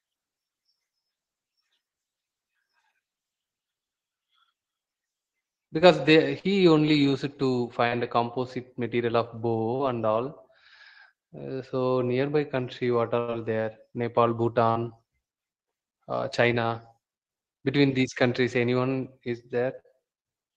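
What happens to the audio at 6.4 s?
At 6.39 to 6.46 s there is short concealed packet loss. About 40 ms of the speech arrived too late to decode, and the receiver bridged the gap by extending the preceding sound before blending back in, heard as a brief smear or wobble.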